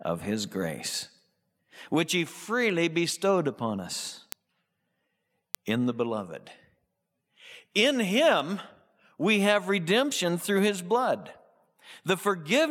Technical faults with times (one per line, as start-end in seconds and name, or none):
0.25-12.47 word clock ticks